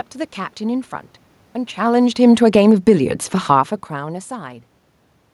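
From 1.77 to 2.85 s the automatic gain control falls, pulling the level down by about 9 dB over roughly a second after judging the input too loud or its background noise too strong. Unlike the talker moving at around 1.5 s, the room noise sinks along with the speech.

The automatic gain then rises from 2.77 to 3.29 s, adding about 4 dB as the input drops by about 21 dB. The background swells together with the speech, which marks it as gain action rather than the talker returning near 3.5 s.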